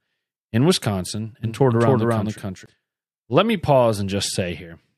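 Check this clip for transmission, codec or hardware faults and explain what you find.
One fault stands out: a doubled audio track from about 1.44 s to 2.66 s. Here the speech is joined by a second full-band copy trailing roughly 0.3 s behind and about as loud as the original, likely because the signal was picked up again through a slower path. Unlike a room echo or reverb, the copy has no decay or room colouring, and it switches on and off abruptly at those times.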